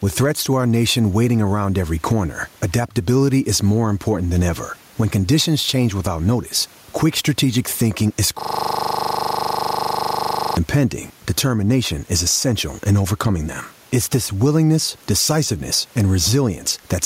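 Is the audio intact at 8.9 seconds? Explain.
No. At 8.9 seconds the clip is inside a system hang loop that runs from 8.41 to 10.57 s, starting right after "quick strategic thinking is" and releasing just before "impending determination is essential". The machine stalled while the audio hardware kept replaying its ring buffer, so one 40 ms slice repeats about fifty times. At 25 Hz that reads as a steady, pitched buzz rather than a stutter. Unlike a dropout or a repeated packet, it doesn't skip or glitch once and recover: the identical fragment cycles without change for over two seconds.

The same moment also carries gain pumping, which runs through the whole recording. The room noise sits about 42 dB below the speech, and the gain swings by around 10 dB. The likely cause is input gain set far too high, with a fast limiter clamping down on every peak. This is different from plain room noise, which holds a steady level. 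Here the loud and soft parts end up closer in level, and the dynamics come out squashed.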